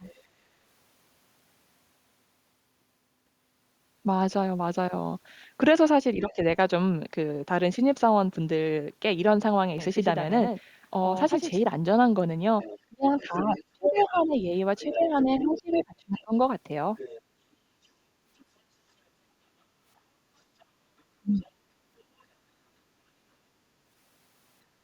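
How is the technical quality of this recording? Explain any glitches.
The recording has several glitches, mostly tied to echo control on a speakerphone-style call, plus one stretch of doubled audio.

Other side's voice leaking through at 0.04–0.18 s, 12.6–17.2 s, 18.39–18.45 s and 20.61–22.02 s. The likely cause is an echo canceller leaving residue of the loudspeaker's playback in the microphone signal. This produces a second voice, from barely audible to fairly clear, loudest in the long middle stretch.

Speech suppressed in double talk at 6.16–6.39 s, 12.86–16.33 s and 21.2–21.6 s. With both sides talking, the echo canceller likely couldn't tell the talker from the echo and pulled both down. The first is a mild dip of about 10 dB. The later two cut the voice by about 30 dB, in pieces totalling roughly two seconds and a third of a second.

Doubled audio track from 9.78 to 11.62 s. A second full-band copy, likely from a slower capture path or a misaligned edit, trails about a tenth of a second behind and about 5 dB quieter. 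It has no room colour and starts and stops abruptly.

Background gated by the echo canceller at 20.15–20.32 s. While the loudspeaker played, the canceller clamped the microphone, and the room tone dips by about 6 dB for about 150 ms before returning.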